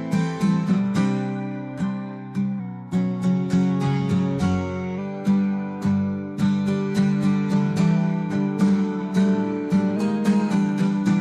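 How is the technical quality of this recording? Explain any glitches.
Two pitch glitches stand out. From 2.60 to 4.98 s everything slows about 6.3% and sags roughly a semitone (113 cents), then snaps back. From 9.96 to 10.51 s it speeds up 6.3% and rises about a semitone (106 cents). Both are likely a drift correction step, where clock-matching software briefly shifted the playback rate.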